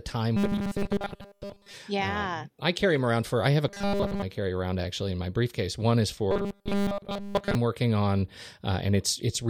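Robotic sound from repeated short buffers hits this speech clip at 0.37–1.73 s, 3.68–4.22 s and 6.31–7.55 s: a rigid, metallic 200 Hz buzz, likely from audio arriving too seldom, so roughly 5 ms chunks repeat while most of the real sound is skipped.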